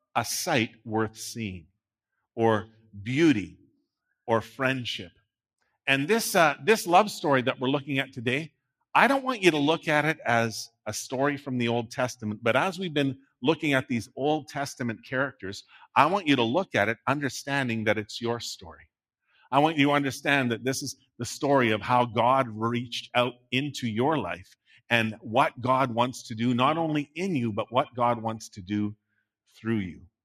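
At 24.67 s the noise suppressor mistakes part of the sound for noise. Until 24.9 s it pulls that material down, by about 11 dB at the deepest point. Around 150 ms is affected in all. The sound sinks briefly, then returns.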